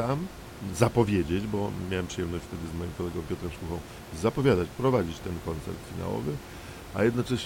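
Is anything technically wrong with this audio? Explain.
No, there's nothing technically wrong here; the only thing you'll notice besides the speech is some ordinary background noise from the room, sitting about 15 dB below it, which was captured along with the recording and isn't a fault of the system.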